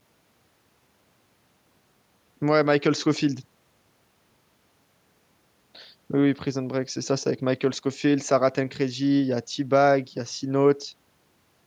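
Nothing in the recording stood out as a technical problem on listening.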